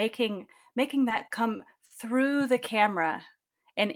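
From 1.09 to 1.92 s there are repeated stalls (stutter). Late packets empty the jitter buffer five times, and the last sound is held over for 130 ms in total, with gaps up to 50 ms. Unlike packet-loss dropouts, nothing goes missing; the speech just drags and hiccups.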